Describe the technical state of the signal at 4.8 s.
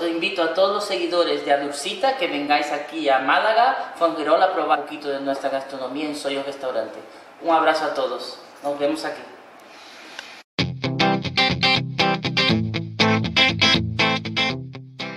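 Compressed frames skipped at 4.74 to 4.76 s: the decoder drops a run of whole frames, about seven at 23.2 ms each, so the audio lurches forward by roughly a fifth of a second. On a waveform the envelope changes abruptly with no gap. A spectrogram shows a vertical seam where the harmonic pattern jumps discontinuously.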